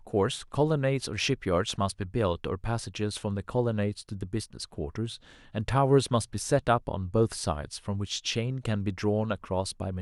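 Listening to this speech recording, nothing technically wrong stood out at any point.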